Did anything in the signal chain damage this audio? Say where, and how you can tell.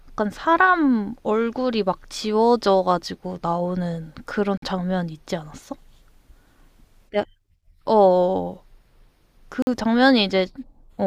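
Yes. The speech has a gap between chunks twice, at 4.58 s and 9.62 s, each a hole of about 48 ms. The repeat spacing of about 5 s points to the storage or playback stage handling the audio in fixed 5-second blocks and leaving silence at each join, with nothing dropped from the sound itself. Unlike a dropout, which cuts away audio, the speech here resumes intact after each hole. The regular timing is what marks it as a block boundary.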